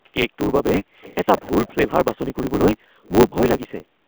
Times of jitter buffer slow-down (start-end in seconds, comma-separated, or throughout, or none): none